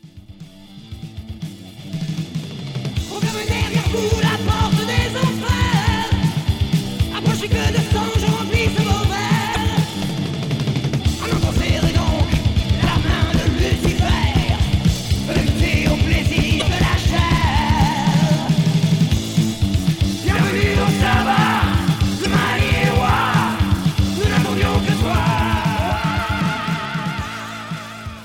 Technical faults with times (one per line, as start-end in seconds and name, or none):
9.52-9.56 damaged data in a compressed stream
16.58-16.62 damaged data in a compressed stream
22.22-22.26 damaged data in a compressed stream